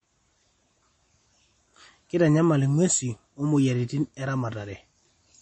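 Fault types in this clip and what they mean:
MP3 compression: a likely low-bitrate MP3 encode, fitting about 32 kbps, ran short of bits, so the encoder removed the treble and discarded weaker detail. Throughout the speech nothing sounds above 8.4 kHz, leaving it dull, with plainly audible coding damage.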